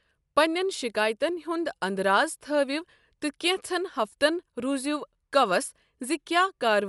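Throughout, the speech sounds dull and fluttery, likely Dolby Digital compression at a low bitrate around 64 kbps; a spectrogram shows nothing above 11.5 kHz.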